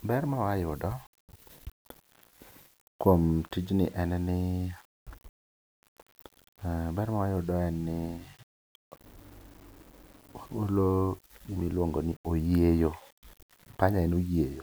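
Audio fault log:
Throughout, low bit depth without dither: a grainy distortion rides on the speech and changes with it, with quiet stretches turning gritty or sputtering. The likely cause is rounding to very few levels, which fits 8 bits, leaving error about 30 dB below the signal.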